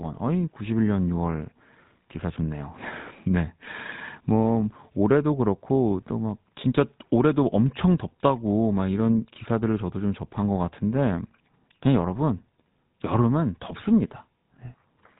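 GSM full-rate codec damage runs throughout: regular-pulse excitation gives the speech a buzzy, gravelly roughness, and nothing passes above 3.8 kHz, which fits 13 kbps GSM.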